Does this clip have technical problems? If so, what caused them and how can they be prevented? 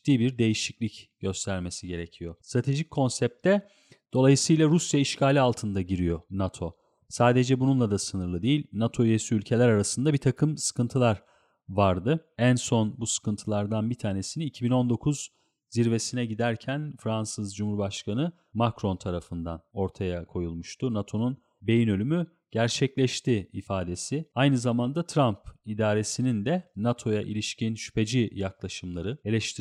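No, there are no technical faults to point to in this recording. With nothing going wrong, there is nothing here that needs preventing.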